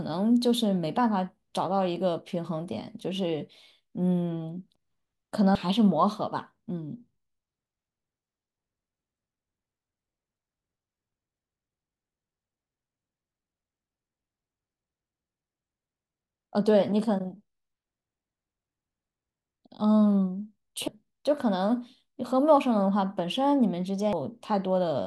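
Short chirps or blips break into the speech at 5.55, 11.12, 12.52, 20.88 and 24.13 s. These come from damaged data in a compressed stream: at each point some of the encoded bytes were corrupted, so the decoder misread those frames, lost sync, and had to search for the next valid frame header before normal playback resumed.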